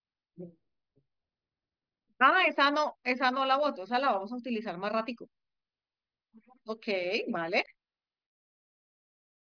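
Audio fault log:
No faults were heard anywhere in this speech recording.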